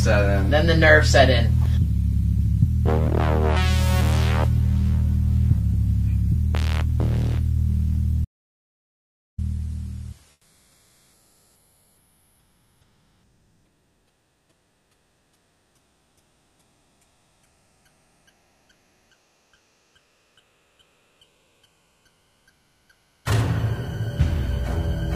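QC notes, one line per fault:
8.24–9.39 s, playback stall: the sound halts mid-flow for about 1.13 s of true silence, then resumes, likely because the player ran out of data or its thread was blocked. Unlike a packet-loss dropout, the break is long and fully silent rather than briefly concealed.
10.31–23.25 s, comfort noise in place of the background: for about 12.9 s the real background, about 35 dB below the loud passages, becomes a steady, featureless noise about 13 dB quieter, likely from discontinuous transmission such as Opus DTX. Unlike a noise gate, the pause is filled rather than muted.
23.23–23.25 s, onset clipped by the voice detector: the first 20 ms of the returning sound is missing, so it starts abruptly without its soft attack, likely because the detector was slow to register the restart. Unlike a stall, nothing pauses; the beginning is simply replaced by comfort noise.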